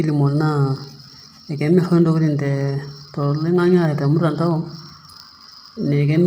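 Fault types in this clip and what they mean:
Low-delay AAC compression: The voice is likely passing through AAC-ELD, the short-frame codec used for calls, starved of bits, consistent with roughly 24 kbps. Heavy damage results: speech sounds rough and grainy, with noise filling gaps between harmonics and a thin, artificial-sounding top band.
Block size mismatch (truncated): One processing stage hands over blocks slightly longer than the next stage reads, so each block's tail is discarded. The regular cuts produce a steady 100 Hz buzz throughout, while so little is lost that speech keeps its normal pace and pitch.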